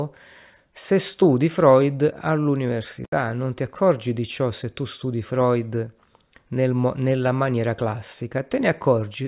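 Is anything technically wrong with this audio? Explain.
No, the speech signal carries no technical faults that can be heard anywhere in the recording.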